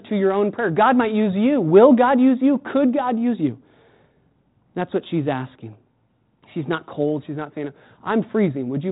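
No technical faults occur in this speech, which is carried through 32 kbit/s G.726 ADPCM with light coding damage and nothing above 3.9 kHz.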